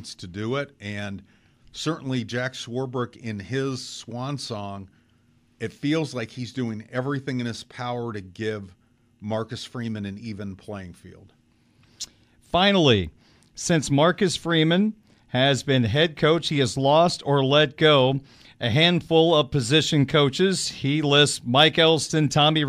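Nothing stood out on listening to the speech recording.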